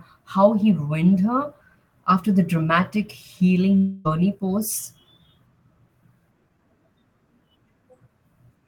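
From 3.77 to 4.07 s the speech breaks into a buzzy, fading continuation of the preceding sound, with no true silence before it resumes. This is likely a long network dropout: about 280 ms of audio never arrived, and the receiver filled roughly 274 ms by extending what it last had.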